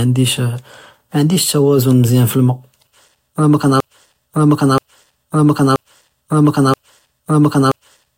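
At 3.80 s the speech locks into a 0.98 s fragment repeating exactly to the end, a broken-record loop, likely a stalled player resending its last buffer.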